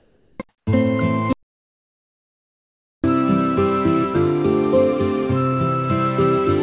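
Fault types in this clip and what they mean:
Comfort noise in place of the background: In 0.00 to 0.40 s and 0.49 to 0.67 s, the quiet background, sitting about 35 dB and about 43 dB below the loudest sound, is replaced by a smoother synthetic noise that drops the level by about 7 dB and about 10 dB. This is likely discontinuous transmission, with the receiver synthesising noise during pauses. Above the 4 kHz ceiling of the narrowband call path, both the real background and this filler are absent.
Audio dropout to silence: From 1.33 s to 3.04 s, a stretch of 1.71 s, the sound cuts off abruptly and is replaced by silence, with no room tone or noise floor at all. It then resumes just as suddenly. This points to a likely loss of the input signal, such as a broken link or a momentary mute, while recording continued and wrote silence. Whatever sounded during that interval is unrecoverable.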